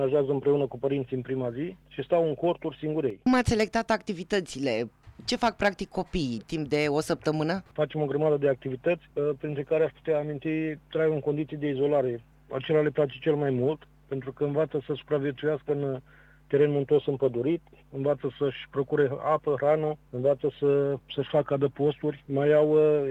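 No technical faults can be heard anywhere in this clip.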